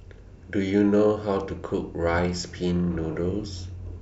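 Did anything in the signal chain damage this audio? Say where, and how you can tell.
No, nothing in the signal chain audibly damaged this speech recording, and the signal stays continuous and intact at every stage along the way.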